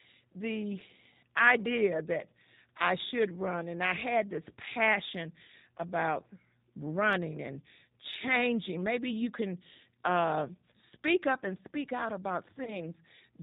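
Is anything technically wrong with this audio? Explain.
Yes. Throughout the clip, the speech has a G.729 codec sound. It is band-limited below 4 kHz, rough and synthetic, which points to roughly 8 kbit/s coding. Between 12.64 and 12.77 s, there is VoIP packet loss concealed by the speech codec. About 30 ms went missing, fitting one lost packet. The decoder stretches the last sound into a fading buzzy tone or coloured noise, and the speech stays weakened briefly afterwards.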